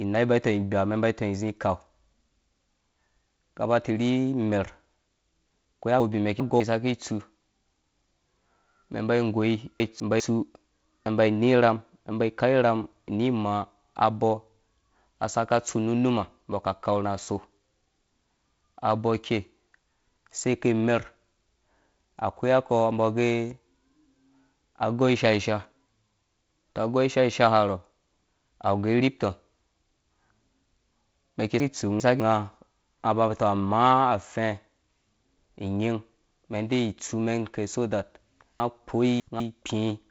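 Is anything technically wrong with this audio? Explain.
Yes. Chunks out of order occur four times: at 6.0 to 6.6 s, 9.8 to 10.2 s, 31.6 to 32.2 s (right after "mɛn ki"), and 38.6 to 39.4 s. In each, a 200 ms block of speech arrives late and plays after the blocks that should follow it, displaced by two, one, two and three blocks respectively. Nothing is missing, but the speech briefly sounds scrambled. Beneath this, the wideband telephone coding tops out near 7.7 kHz with light hiss, which fits G.722 at 48 kbit/s.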